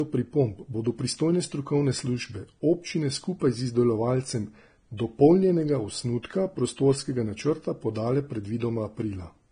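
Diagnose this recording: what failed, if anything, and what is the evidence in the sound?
The codec stage failed: this speech has likely passed through a low-bitrate encoder and then been saved again at a high bitrate, so it is low-bitrate audio saved at a high bitrate. Throughout the clip nothing sounds above about 9.7 kHz, a hard ceiling that fits a heavily compressed first encode. The later high-rate pass keeps the file large but cannot rebuild the discarded top band or the first encoder's damage, and adds almost nothing audible itself.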